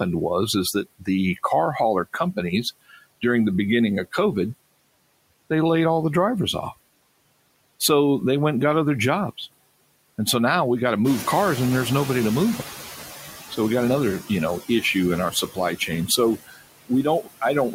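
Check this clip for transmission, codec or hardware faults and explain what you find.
The faults here all come from the noise suppressor on this speech, with nothing pointing to the link, codec or hardware.

Noise suppressor artifacts run throughout: bands judged to be steady noise are pulled down by about 19 dB frame by frame, so the residue sinks between phrases.

Noise suppressor catching up, 11.04 to 13.13 s: when the room noise jumps by about 11 dB near 11 s, the noise estimate lags. At first only about 9 dB comes off, and the noise stays louder for 2.09 s until the estimate adapts.

Speech cut by the noise suppressor, 15.31 to 15.58 s and 16.37 to 16.6 s: speech mistaken for noise is turned down by up to about 14 dB and about 18 dB. Roughly a tenth and then a fifth of a second of sound comes out swallowed and faint.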